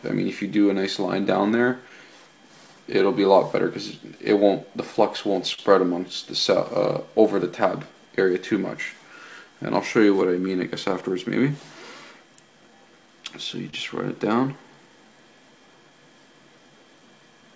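Clock drift between sender and receiver runs through the whole clip. The sending clock is about 3 percent slow. The receiver's buffer keeps draining and it has to compensate. Small, uneven timing hiccups recur from start to finish.

From 0.74 to 4.69 s come repeated timing corrections. Playback runs at 97 percent speed, and the receiver repeats short pieces to fill the gap. Roughly a tenth of a second is added.

At 5.54 to 5.59 s there is a short stall from a late packet. The buffer ran dry. The last sound is held for 38 ms, then playback resumes where it left off. Nothing is lost, but a sound is held too long.

From 6.57 to 17.49 s the repeated timing corrections return at 98 percent speed. About a third of a second is added across this stretch. Within it, at 13.70 to 13.74 s, a second stall holds the sound for 27 ms. The sound then carries on without gaps. Throughout, the G.722 call path at 64 kbps leaves nothing above 8 kHz.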